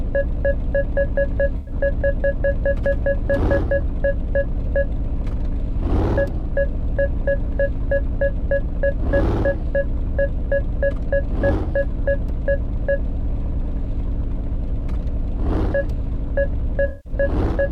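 You get AAC frame loss with concealment twice, at 1.57 to 1.72 s and 16.88 to 17.13 s. The decoder papers over each gap by reusing the last good spectrum, so both patches sound like a smeared, noisy or phasey stretch. Their lengths, about 107 and 171 ms, point to roughly five and eight dropped frames.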